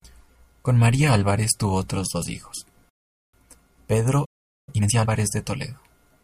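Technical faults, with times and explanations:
2.89–3.33 s, rebuffering stall: The speech cuts to silence for 440 ms, then picks up exactly where it broke off. The player ran dry of downloaded audio and waited for more. Nothing is skipped, but the pause adds 440 ms.
4.25–4.69 s, playback stall: The speech stops mid-flow for about 425 ms of silence before output returns. The likely cause is the player running out of data or its audio thread being blocked. The gap is long enough to hear as a hitch.
4.69–5.11 s, time-compressed catch-up: Right after the stall, the speech runs at twice normal speed while its pitch stays unchanged. The player trims its backlog by removing small slices and cross-fading the joins. That splicing gives a hurried delivery.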